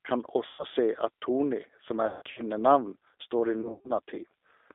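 The whole clip runs through a G.729 codec (the G.729A variant at 8 kbit/s), and you can plainly hear it: the speech is squeezed into a 300 Hz to 3.6 kHz phone band and rebuilt from a handful of pulses, so it comes out slightly rough and synthetic.

On top of that there's VoIP packet loss concealed by the speech codec, three times. From 0.47 to 0.64 s about 120 ms went missing. From 2.07 to 2.47 s there's a worse patch, with 210 ms lost in gaps spread over 300 ms and the longest single gap 150 ms. From 3.61 to 3.92 s, 180 ms is lost across 240 ms, with a 120 ms run. Each time the decoder keeps stretching its last pitch and filter, turning quieter as it goes, so the sound smears into a fading buzzy tone or coloured noise and stays weak for a moment after the packets come back.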